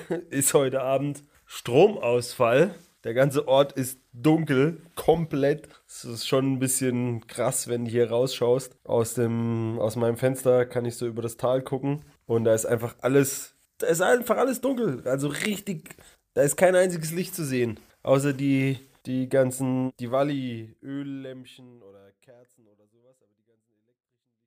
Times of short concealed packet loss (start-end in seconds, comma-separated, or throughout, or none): none